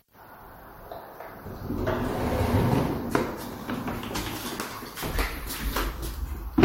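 At 1.44 s there is a single burst of damaged data in the compressed stream. Part of the encoded stream at that point was corrupted, so the decoder misread the affected frame, lost sync and had to find the next valid frame header before it could resume. The result is a short glitch lasting under 20 ms. On a spectrogram it shows as a thin vertical break, and the waveform has an abrupt discontinuity where the sound breaks and resumes.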